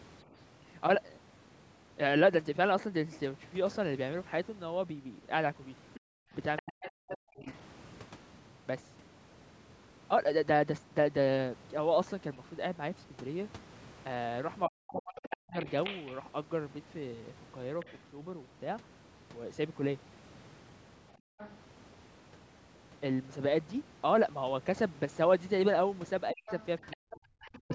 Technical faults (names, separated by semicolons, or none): other side's voice leaking through; speech suppressed in double talk; background gated by the echo canceller